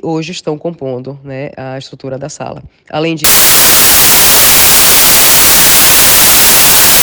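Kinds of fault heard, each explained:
Samples built from the wrong bytes: From 3.24 s to the end, each sample's bytes are combined wrongly, so the low bits dominate. This turns the sound into loud, harsh broadband noise.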